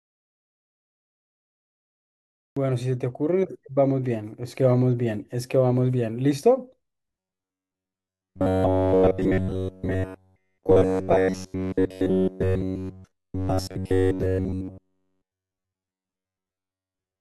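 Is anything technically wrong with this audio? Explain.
Yes, two faults are audible.

From the start until 2.57 s there is an audio dropout to silence: the input was likely cut off while the recorder kept writing zeros. The clip opens already silent, with no room tone, and the waveform is a flat line with an empty spectrogram.

From 7.19 s to the end at 17.2 s there is robotic sound from repeated short buffers. The cause is likely late audio delivery, with a segment of about 10.7 ms replayed to fill the gaps, and essentially all of this stretch is repeated material. It gives a rigid metallic buzz at 93.8 Hz. The spectrogram shows evenly spaced horizontal harmonic lines, and the waveform shows one short cycle repeating.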